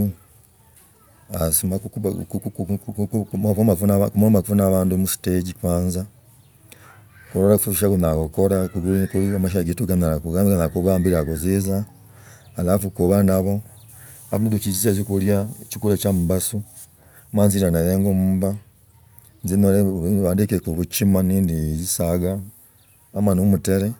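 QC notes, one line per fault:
Nothing to flag here; I listened all the way through and didn't catch a single problem.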